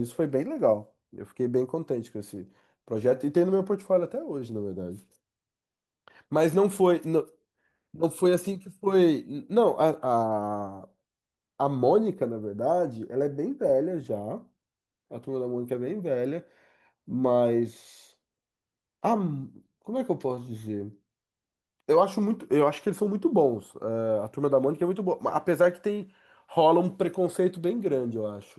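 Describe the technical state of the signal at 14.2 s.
At 14.2 s the speech is inside a stretch affected by clock drift between sender and receiver. That drift runs through the whole clip. The sender's clock runs roughly 3% slow against the receiver's. Audio arrives a little more slowly than it is played out. The jitter buffer keeps draining toward empty. The result is a faint, uneven unsteadiness in timing rather than a single clear defect.

Repeated timing corrections cover the span from 0.48 s to 28.58 s, including this moment. To cope with the slow sender, the receiver keeps repeating short pieces of audio. Each edit stretches the signal a little. Playback runs at about 98% of normal speed. Together the edits add somewhat under a second. Each one is small. They sound like slight hiccups or a wavering tempo, spaced irregularly.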